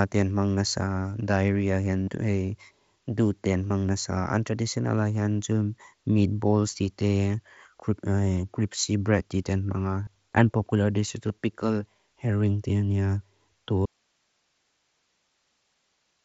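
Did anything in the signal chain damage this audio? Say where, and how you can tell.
Yes. On the Bluetooth link, concealed Bluetooth headset packet loss appears at 2.04–2.08 s (45 ms), 3.68–3.70 s after "doot din", 10.05–10.07 s after "cripsy bread diten", and 11.28 s before "pickle herring". The receiver patched each gap by repeating a recent pitch cycle. The waveform shows copied periods, and the spectrogram shows brief, evenly spaced buzzy harmonics.

An audio dropout to a faint residue begins abruptly at 13.86 s and runs to the end. Only hiss remains, about 45 dB below the signal. On the waveform the level collapses to a flat noise floor, and the spectrogram goes empty apart from faint broadband grain. The likely cause is the incoming signal stopping while the downstream path stayed live.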